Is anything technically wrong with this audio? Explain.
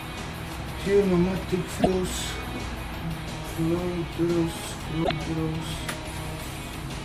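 Yes. Damaged data in the compressed stream at 1.77–1.87 s and 5.00–5.11 s: the decoder misreads corrupted frames and loses sync, producing two brief, roughly 0.1 s glitches.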